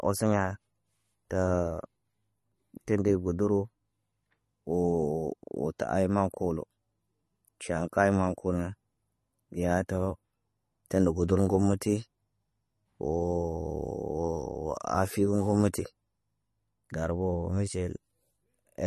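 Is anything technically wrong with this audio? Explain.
Yes. Throughout the speech there is plainly audible codec damage, likely from MP3 compression at a low bitrate around 40 kbps. The encoder has removed everything above 12.6 kHz, dulling the top end, and weak spectral lines switching frame to frame give a watery, swirly texture.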